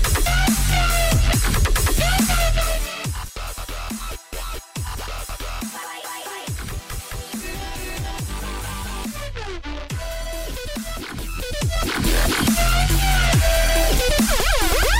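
From 2.48 to 3.20 s the level drops by about 10 dB in 1 dB steps, roughly twenty a second, with no smoothing, so each step clicks and a zipper noise ticks over the sound. A smooth fade would glide without that ticking.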